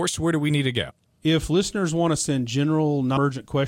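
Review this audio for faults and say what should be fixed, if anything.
Compressed frames are skipped at 0.89–0.91 s, between "do we need to" and "if listeners want to", and at 3.16 s. Whole frames are lost or rejected as damaged, so the speech jumps ahead by roughly a tenth, then a fifth, of a second. Unlike a dropout, no silence fills the gap. Only a brief glitch marks the join. Re-encode from an intact source and check that the file decodes without frame errors.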